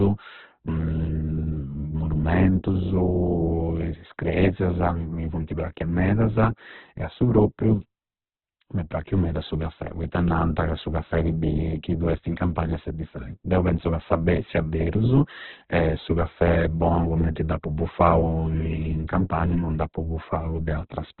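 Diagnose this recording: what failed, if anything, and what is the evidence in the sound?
Codec stage, throughout: heavy Opus compression, likely at a very low bitrate. Nothing above 4.2 kHz, so the speech sounds muffled, with grainy, noise-filled bands.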